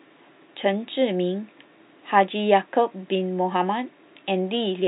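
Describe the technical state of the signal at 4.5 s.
At 4.5 s the audio is intact, with only the room's own background noise sitting about 47 dB below the speech.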